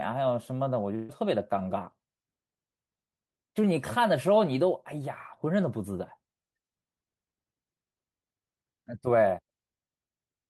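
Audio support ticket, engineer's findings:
Burst of packet loss, 0.95–1.11 s: receiver concealment holds the last sound and fades it for 134 ms, skipping 140 ms. Spectrogram: frozen, decaying band, then a hard restart.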